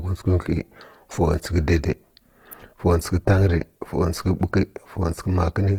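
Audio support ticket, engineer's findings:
Rough, grainy, noisy texture across the whole clip; bands filled rather than hollowed. Likely Opus compression in CELT music mode, starved of bits, consistent with roughly 16 kbps, bandwidth still fullband, content reaching 20.2 kHz.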